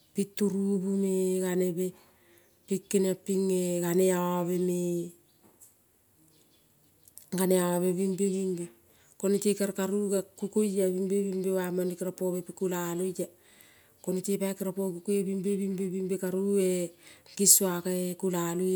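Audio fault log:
No audible faults detected anywhere in the speech clip.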